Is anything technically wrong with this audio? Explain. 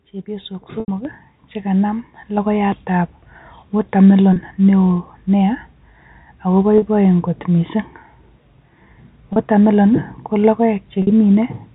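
Yes, two things stand out, both sitting on top of a telephone-band signal that stops at 4 kHz, as G.711 does.

Packet loss with pitch repetition turns up five times: at 0.8 s (about 80 ms), 4.33 s (30 ms), 6.78 s (40 ms), 9.33 s (30 ms) and 11.02 s (50 ms). The receiver bridges each gap by looping the last pitch period. The short ones come across as a brief buzzy, held sound. The 80 ms one outlasts the roughly 50 ms fade-out, so it sinks toward silence before the speech cross-fades back in. The gap sizes fit 10 ms packets.

Then at 1.05 s the microphone volume steps up by about 7 dB in one go. The call software presumably decided the input was too quiet and bumped the device gain. You hear the voice and the background noise jump up together, abruptly rather than as a smooth ramp, and it lands just after that first long dropout.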